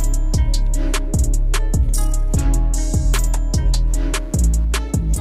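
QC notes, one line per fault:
3.88–5.20 s, computer activity noise: a buzzing, chirping layer appears at 3.88 s and continues to the end, pulsing at around 150 Hz and sitting roughly 35 dB below the main signal. Its onset and texture follow the machine's activity, not the sound being recorded, which points to processor, graphics or mouse load currents disturbing the ground shared with the audio circuit. That ground movement is summed into the signal as a faint rhythmic buzz.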